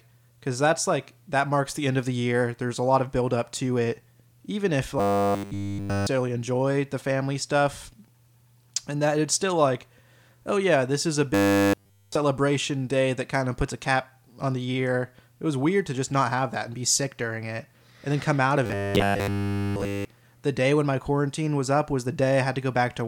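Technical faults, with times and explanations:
4.99 to 6.07 s, 11.34 to 12.15 s and 18.66 to 20.05 s, robotic sound from repeated short buffers: the speech collapses into a rigid, metallic buzz pitched at 100 Hz, first just before "enjoy the family stuff", then after "yeah this is a", and again between "then come out of" and "the day when my". Nearly every stretch is a repeat rather than new audio, likely from a starved playback path looping a 10 ms buffer whose repetition rate sets the pitch.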